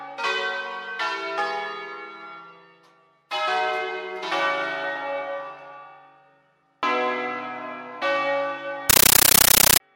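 From 8.90 to 9.80 s the sound gives way to loud, chattering static, the signature of a compressed stream played as audio. An AC-3 (Dolby Digital) bitstream is being passed straight to the output as if it were ordinary samples, likely because an S/PDIF or HDMI link was not decoding it. Each 13.3 ms burst of noise is followed by silence, repeating 31.25 times a second, which fits 640 kbps frames padded out to fixed slots. On a waveform this shows as solid blocks of noise separated by flat quiet gaps. A spectrogram shows vertical broadband stripes spanning the whole frequency range at a steady 32 ms spacing, with no harmonic structure.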